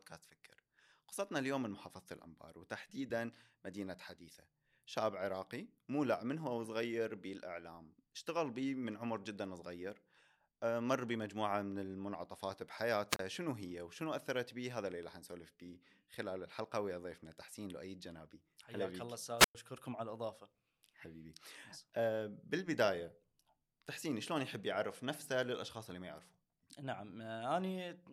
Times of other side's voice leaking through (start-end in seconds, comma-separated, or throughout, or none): none